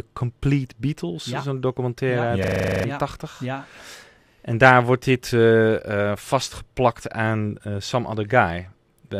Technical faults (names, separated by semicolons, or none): system hang loop